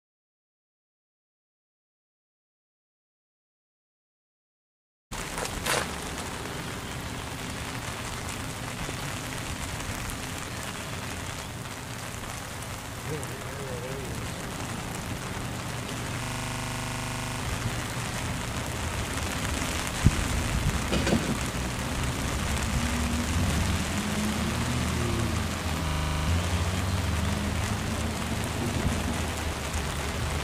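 System hang loop at 16.24–17.4 s and 25.88–26.28 s: a single 40 ms slice of audio repeats exactly, at 25 Hz, as a rattling buzz, while the sound hardware kept replaying its ring buffer during a freeze, losing about a second, then under half a second.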